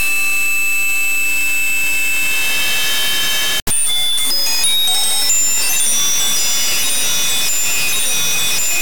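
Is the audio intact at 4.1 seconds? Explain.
No. At 4.1 seconds, as across the whole clip, a stuck bit is audible: harsh, buzzy distortion, with quiet stretches filled by noise. This likely comes from one data bit held fixed, offsetting about half the samples by a step of about -10 dBFS.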